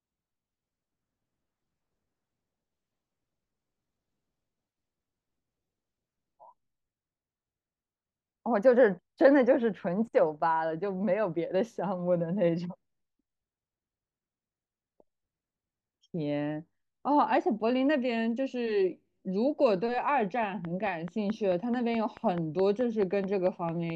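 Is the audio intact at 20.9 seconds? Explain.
No. A train of clicks runs from 20.43 to 23.91 s, about fifteen evenly spaced pops at 4.6 per second, likely from interference or a faulty connection. They tick over the speech and pauses, appearing as regular vertical broadband lines and sharp waveform spikes rising about 5 dB above the speech.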